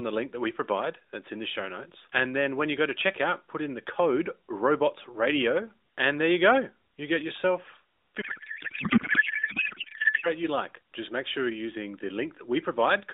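Speech over an AMR narrowband mobile link at 12.2 kbps, band-limited to roughly 250 Hz to 3.7 kHz. From 8.22 to 10.30 s a codec payload misread turns the speech into garbled, warbling noise, consistent with octet-aligned AMR frames decoded as bandwidth-efficient, so every field lands in the wrong place.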